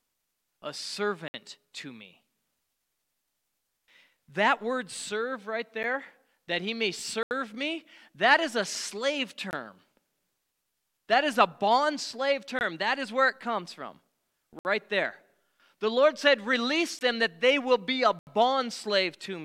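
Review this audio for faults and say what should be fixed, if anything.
Block of digital silence at 1.28–1.34 s, 5.83 s, 7.23–7.31 s (between "that he may" and "me that is a"), 9.51–9.53 s (after "that is a slave"), 12.59–12.61 s, 14.59–14.65 s (after "where it comes from"), 16.99–17.01 s and 18.19–18.27 s. In each, the speech drops abruptly to silence and returns without a fade. The shortest gap, about 10 ms at 5.83 s, is heard as a tick. The 60 to 80 ms gaps are audible holes in the speech. The cause is blocks of output samples left unfilled, most often because audio processing did not deliver a buffer in time. To prevent it, give the audio thread larger buffers or more scheduling headroom and check processing for invalid values so no block is ever output empty.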